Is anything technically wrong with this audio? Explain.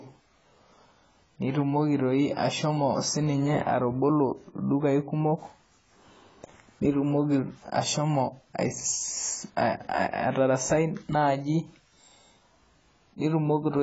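Yes. Throughout the speech, the sound has the marks of heavy low-bitrate lossy coding, most likely AAC compression, in the AAC-LC form. The encoder seems to have been starved of bits, which fits a bitrate around 16 kbps. It cut the bandwidth off at 7.7 kHz and coarsely quantised what remained. Nothing is heard above that point, so the speech sounds dull and muffled, and sibilants and sustained sounds take on a smeared, warbling, fizzy texture.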